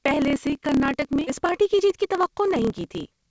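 Block size mismatch (truncated) runs through this whole speech clip: one stage writes longer blocks than the next reads, discarding each block's tail, giving a 36.3 Hz buzz and 1.09 times faster delivery at near-normal pitch. Skip ahead at 1.27 s: roughly 0.7 s of speech is lost when queued audio is dropped, and the two sides are spliced with no gap. Jitter buffer speed-up from 1.42 to 3.27 s: the receiver trims short pitch-period pieces repeatedly, removing about a fifth of a second, so speech runs at 109% with unchanged pitch and sounds hurried. The G.722 call codec at 64 kbps on this path adds its usual coding noise.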